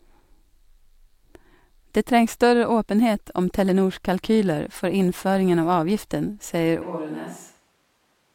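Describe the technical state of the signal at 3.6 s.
The speech signal at 3.6 s is intact, with no audible fault at that moment.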